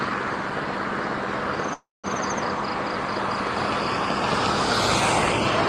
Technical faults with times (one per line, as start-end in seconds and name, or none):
1.73-2.06 call audio freeze